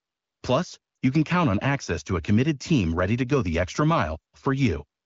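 A speech clip carried over the AMR wideband (HD Voice) codec, with light coding texture. One lost AMR speech frame occurs at 0.95 to 0.97 s, just before "you can count on". The 20 ms gap gives a brief dip or warble. The decoder filled it by reusing the last good pitch and vocal tract settings at reduced gain. Speech then resumes.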